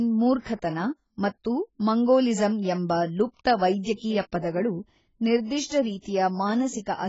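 From start to end, the speech has nothing above 7.7 kHz and sounds dull, smeared and watery, with fizzy sibilants and warbling on held sounds. The likely cause is heavy AAC compression, AAC-LC starving its frequency bands, which fits a bitrate around 16 kbps.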